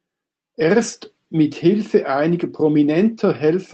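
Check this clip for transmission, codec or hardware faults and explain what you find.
No transmission, codec or hardware faults show up anywhere in the speech. It has gone through a call path, and its top end stops at about 8 kHz, which points to a wideband voice codec such as Opus at a modest bitrate.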